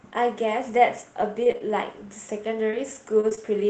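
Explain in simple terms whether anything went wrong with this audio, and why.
A few things went wrong, all from the call's network connection rather than the recording itself.

Between 1.21 and 1.71 s there's repeated packet loss, which gives the speech a robotic sound. Four chunks of audio went missing in that half second, the longest about 25 ms and roughly 60 ms in all. Each time, the receiver papered over the hole by carrying the last bit of sound forward. The holes come so close together that the patching itself becomes audible as a choppy stretch with bits missing.

Then there are three cases of short concealed packet loss, at 2.71–2.74 s, 3.29–3.33 s and 3.35–3.39 s. Each time about 20 ms of speech never arrived, and the receiver guessed its way across the gap before blending back into the real audio. These are tiny, so you get a quick smear or wobble, and a short consonant could be lost in one of them. 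The last two sit very close together.

Finally, at 3.20–3.25 s there's a short stall from a late packet. Here nothing was actually lost. A packet just showed up late, so the receiver held the current sound for about 28 ms while it waited, then picked up right where it left off. What you hear is a sound dragged out a touch too long, maybe with a faint buzz.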